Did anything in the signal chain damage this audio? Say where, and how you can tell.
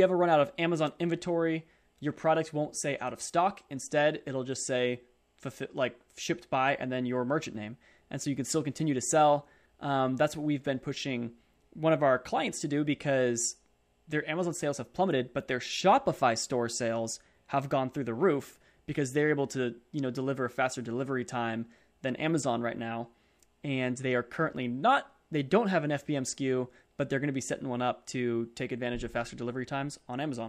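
No, nothing in the signal chain stood out as having damaged this speech recording on listening.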